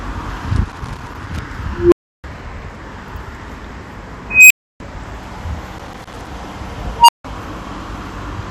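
Throughout the clip the sound is dull, with the top end missing and a gurgling, granular texture in what remains. This is likely MP2 compression: the codec has too few bits for its 32 sub-bands, so upper bands drop out and flicker while the surviving ones are coarsely quantised. The damage is plainly audible and fits a low rate of around 80 kbps.

From 0.56 to 1.42 s there is loose connector crackle. A contact is intermittently making and breaking, chopping the signal into an irregular scratchy burst.

At 1.71 s an unstable filter produces a tone near 400 Hz that swells to clipping over about 0.2 s. The output then overflows, and the audio drops out for 0.32 s until the filter resets. The same fault returns at 4.30 s as a tone around 3 kHz, again building over about 0.2 s and followed by 0.3 s of silence.

Loose connector crackle recurs from 5.78 to 6.27 s.

A final unstable filter event at 6.99 s sounds a tone near 1 kHz. 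It grows in roughly 0.1 s, and the audio then goes silent for 0.16 s.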